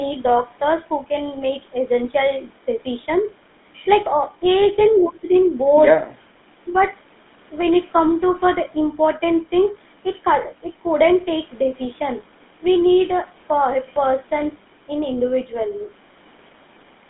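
From start to finish the speech has a buzzy, gravelly roughness, and its band is held to roughly 200 Hz to 3.6 kHz, so it sounds thin and boxed-in with no air on top. This is GSM full-rate codec damage, and it is plainly audible. That codec, which fits a 13 kbit/s stream, models the vocal tract and excites it with regularly spaced pulses built from only every third sample, which gives the grainy texture. The call microphone processing ahead of it leaves the low end trimmed as normal.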